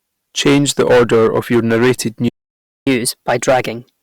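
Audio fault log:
throughout hard clipping: the speech is driven about 15 dB past what a stage in the chain can pass, so roughly 7 percent of samples are cut flat at the ceiling. Those flattened peaks add high harmonics, heard as a harsh fuzz on every loud syllable.
2.28–2.87 s playback stall: the output goes silent for about 0.58 s right after "order of your narrated", which points to the player likely running out of data or being blocked. The speech simply stops mid-flow, then resumes.
2.87–4.02 s catch-up at higher speed: to recover the lost time, the player resamples its backlog and plays it 1.15 times faster. Speed and pitch rise together, lifting the speech by roughly two semitones until the clip ends.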